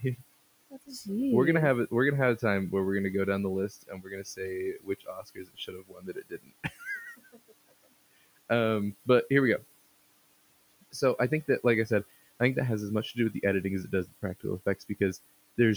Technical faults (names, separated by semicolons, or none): speech cut by the noise suppressor